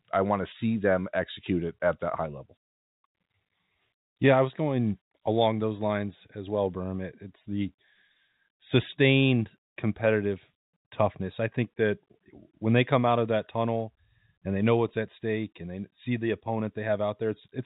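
Nothing in this speech recording points to a technical fault. It carries the narrow sound of G.711 telephone coding, with nothing above 4 kHz and at most a faint quantisation hiss that rises and falls with the level.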